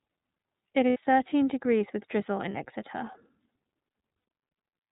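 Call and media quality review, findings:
Throughout: speech band-limited with nothing above 4 kHz, slightly rough and synthetic texture. iLBC codec, narrowband; sound fits the 13.33 kbps, 30 ms frame mode.

Brief held, buzzy vowel fills at 0.90–0.97 s before "thirteen degrees with drizzle", 2.51–2.56 s after it, and 4.19–4.25 s. Lost iLBC frames: decoder repeats last pitch cycle with noise.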